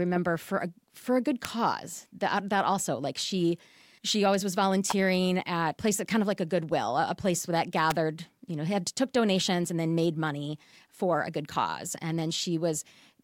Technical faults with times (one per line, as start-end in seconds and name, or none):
1.45 electrical switching spike
4.90 electrical switching spike
7.90 electrical switching spike